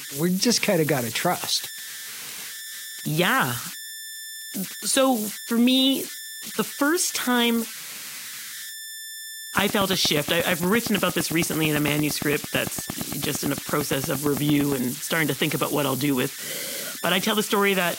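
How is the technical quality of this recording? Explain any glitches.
The recording has two clear technical faults, one running through the whole clip and one confined to a stretch in the middle.

Converter idle tones are present from start to finish, sitting about 11 dB below the speech. An undithered delta-sigma converter settles into repeating bit patterns on small inputs, producing a whistle around 2 kHz in pauses and grain under quiet passages. A spectrogram shows a thin horizontal line near 2 kHz.

A train of clicks runs from 9.59 s to 14.73 s, ending just before "and starting to think". About fifty sharp, similar pops arrive regularly at 8.76 per second, peaking roughly 10 dB above the speech, likely from electrical interference or a faulty connection. The waveform shows evenly spaced spikes, and the spectrogram shows matching vertical stripes.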